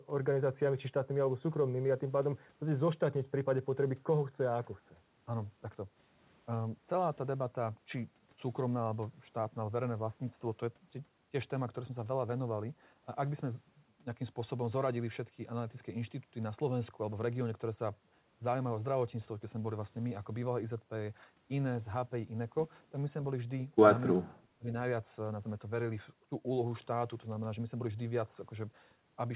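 From 24.18 to 24.73 s the speech dips sharply, by roughly 30 dB. This is speech suppressed in double talk, likely from an echo canceller turning down this side's talker along with the loudspeaker echo. Throughout, nothing sits above 4 kHz, which fits a narrowband telephone codec.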